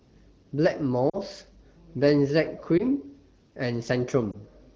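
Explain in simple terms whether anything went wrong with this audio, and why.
Three short glitches come from lost AMR speech frames. At 1.10 to 1.18 s, 2.77 to 2.83 s and 4.31 to 4.36 s, the speech briefly dips and warbles. Radio errors corrupted small chunks of the coded speech, so the decoder filled each gap by repeating the last good sound with falling volume. The first dropout is longer, roughly two frames' worth, and the other two sound like one frame each. The AMR wideband (HD Voice) coding carries the speech clearly around these gaps.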